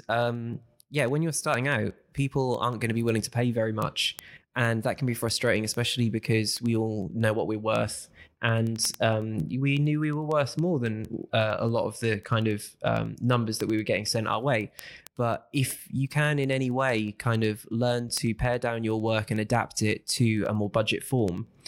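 Speech carries word clock ticks from 0.17 s to 21.65 s: sharp ticks of uneven strength at a steady rate near ten per second. An unlocked receiver clock drifts a few hundred ppm from the sender, slipping one sample per tick. The metronomic spacing separates them from random crackle.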